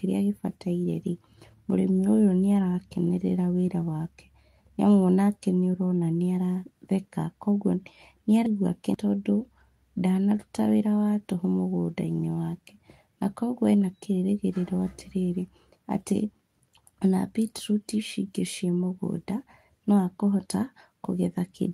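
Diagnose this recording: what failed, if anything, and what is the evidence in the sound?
Nothing failed; no faults heard.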